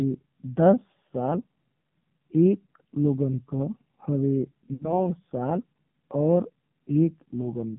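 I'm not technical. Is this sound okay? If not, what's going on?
No. This speech was sent over an old-style phone link, a AMR narrowband mobile codec. It keeps only a narrow slice of sound, roughly 150 Hz to 3.5 kHz, so the voice sounds thin and boxed-in. The link squeezed the voice very hard here. It rebuilds speech from a rough model of the mouth and throat, and that makes it buzzy and artificial throughout.

There are also lost AMR speech frames, from 4.74 to 5.07 seconds. Radio errors spoiled a short stretch of data, about 60 ms, which fits three lost frames. The phone filled the gap by repeating the last good sound while turning it down. You hear a brief smeared, warbling dip, and then the voice comes back sounding weak or rough for a moment.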